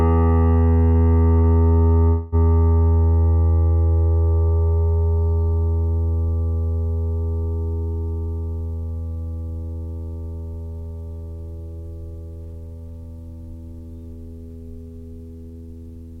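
At 0.91 to 0.98 s and again at 1.39 to 1.47 s, short stalls from a late packet occur: the jitter buffer ran dry, so the receiver held the last bit of music for about 36 ms and then 49 ms, resuming exactly where it left off. Each sounds like a brief smeared hold with a faint buzz or dip.

From 2.08 to 2.35 s comes a call audio freeze, likely packets delayed in transit emptying the buffer. The music stalls into a held, fading buzz or hiss continuing its last sound for about 243 ms without falling to silence, then carries on from the same point, so a gap is inserted rather than anything lost.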